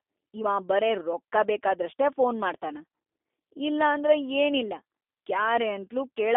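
Speech runs through the G.729 codec for its whole length, and the damage is plainly audible: a slightly rough, synthetic edge, as the codec rebuilds each frame from a vocal-tract filter, pitch predictor and a few pulses, which fits an 8 kbit/s G.729A link. On a spectrogram the energy sits in a telephone band of roughly 300 Hz to 3.6 kHz, with a flat empty ceiling above 3.8 kHz and a thin floor below 300 Hz.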